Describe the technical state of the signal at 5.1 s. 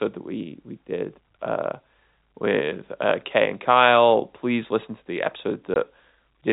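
At 5.1 s the speech comes through intact, carried by the narrowband telephone path that leaves it without content above 4 kHz.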